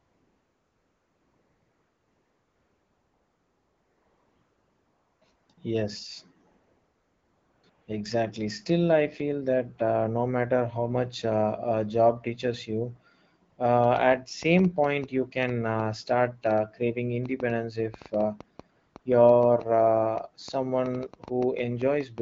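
Right from the start, 0 to 5.21 s, the phone decided nobody was talking and stopped sending speech frames, so what you hear is AMR comfort noise: a smooth, steady synthetic hiss standing in for the real background. It keeps switching in and out after that, at 5.35 to 5.49 s, 5.53 to 5.57 s, 6.49 to 7.63 s, 7.69 to 7.87 s and 13.49 to 13.57 s. The room tone flips to that flat fill and back, and quiet tails can get clipped at the edges.

From 13.84 s right to the end at 22.19 s there's a train of clicks, about 40 of them at roughly 4.7 per second. They're unevenly spaced and peak about 5 dB above the speech, so they tick and pop audibly, in the gaps too. It's likely interference or a struggling interface injecting the same pulse over and over.

Meanwhile the comfort noise cuts in twice more, at 18.75 to 18.95 s and 18.99 to 19.05 s, underneath the clicking. The AMR wideband HD Voice codec at 12.65 kbit/s leaves only light coding texture on the speech.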